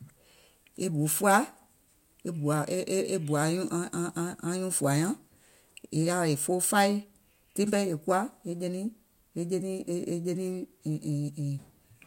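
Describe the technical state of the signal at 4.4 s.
At 4.4 s the speech signal is intact, with no fault audible at that moment.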